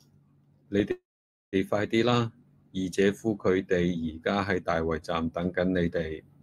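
At 0.91 s the speech halts in a call audio freeze lasting to 1.56 s: the last sound trails off as a fading buzz or hiss, then about half a second of silence, likely from delayed packets draining the jitter buffer. Unlike packet loss, nothing is skipped; speech resumes exactly where it stopped, just 0.61 s late.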